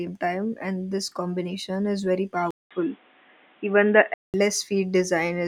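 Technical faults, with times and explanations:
2.51–4.34 s, input switched to a poorer device: after "this combination is very", a 0.2 s gap, then dull audio cut above 3.8 kHz with faint new noise, likely a narrower-band microphone.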